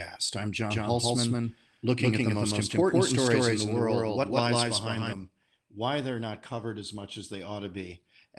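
Speech with a doubled audio track from 0.71 to 5.13 s: an equally loud, dry copy trails by about 150 ms, likely a second capture path, showing as every waveform shape repeated and abruptly starting and stopping.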